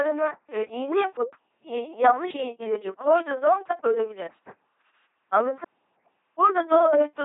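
A buzzing, mechanical robot voice runs through the whole speech clip, with nothing above 3.8 kHz. This is LPC-10 vocoder damage: each moment is rendered as a pulse train or as noise, which fits a 2.4 kbit/s stream.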